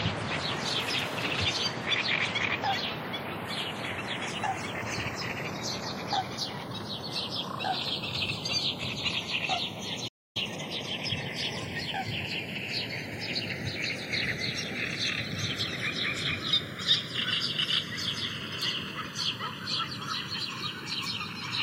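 A recording of everyday sounds with three faults. Throughout, the channels are drifting apart. One channel runs roughly 40 ppm off the other's clock, so the gap between them creeps up to under a millisecond. Summed to mono, comb notches glide slowly, giving a slow flanging sweep. At 10.07 s there is a playback stall. The sound cuts out mid-flow for about 274 ms, until 10.37 s. The player likely ran dry of data or was briefly blocked. From 10.37 s to 11.45 s comes a time-compressed catch-up. The player trims small pieces and cross-fades the joins to clear its backlog. The sound hurries at 1.25 times normal speed. Pitch stays put.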